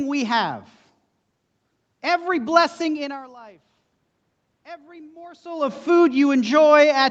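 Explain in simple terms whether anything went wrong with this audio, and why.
Automatic gain rising, from 4.68 to 6.2 s: the level of the sound dropped sharply, so the call's volume control slowly turned itself up over about a second and a half. You can tell it apart from a talker moving because the room's background noise swells along with the speech.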